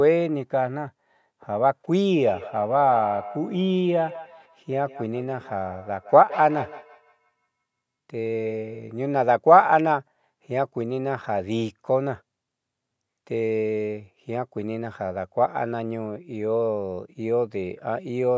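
From 2.24 to 8.95 s, two devices on the call formed a feedback echo loop, so the speech returns roughly every 150 ms, thinner and ringing, peaking about 14 dB below the speech.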